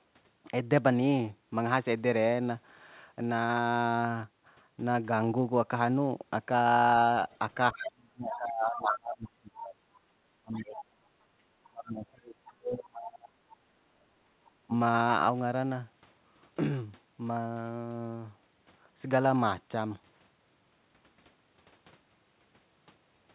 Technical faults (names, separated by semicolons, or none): other side's voice leaking through; speech suppressed in double talk; background gated by the echo canceller